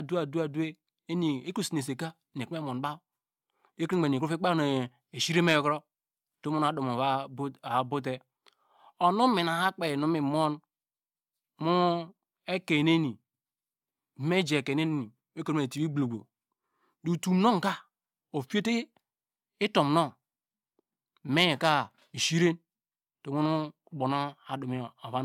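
From start to finish, the speech has a swirly, smeared quality with a hollow edge. Consonant attacks sound blurred rather than crisp. Content reaches up to about 20.2 kHz, so there is no low cutoff. The likely cause is generation loss: the audio was lossy-encoded and decoded about three times. Each pass quantised on a shifted frame grid, stacking noise. The character points to AAC-LC at around 96 kbit/s.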